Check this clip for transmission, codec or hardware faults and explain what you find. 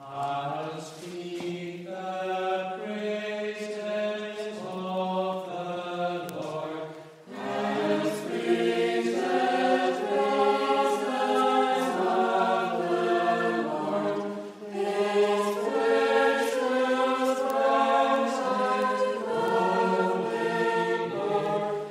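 There is one fault, word clock ticks, from 0.36 s to 21.46 s. The receiving device is running on its own clock, roughly 30 ppm off the sender's, so one sample slips about every 0.7 s. This produces around thirty sharp, regularly spaced ticks across the sound.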